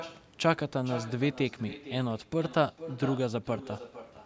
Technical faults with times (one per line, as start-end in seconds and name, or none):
0.00-4.25 echo with no canceller